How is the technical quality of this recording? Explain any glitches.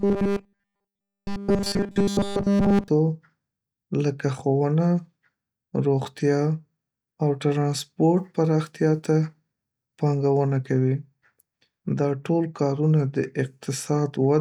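Robotic sound from repeated short buffers mars the opening, from 0.01 to 2.88 s. Audio likely arrived too slowly, so about 5 ms of it was looped continuously, imposing a rigid 200 Hz metallic buzz on the speech.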